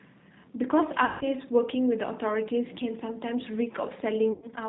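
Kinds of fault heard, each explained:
G.729 codec: The speech sounds narrow, slightly rough and synthetic throughout, with plainly audible coding damage and nothing above 4 kHz. This fits an 8 kbit/s G.729A encoding, which rebuilds each 10 ms frame from a vocal-tract filter, pitch predictor and sparse pulses.
VoIP packet loss concealed by the speech codec: At 1.05 to 1.25 s and 4.32 to 4.46 s the speech smears into a fading buzzy tone or coloured noise. The decoder was extrapolating from its last pitch and filter over roughly 160 ms and 100 ms of lost packets, with weakened recovery afterwards.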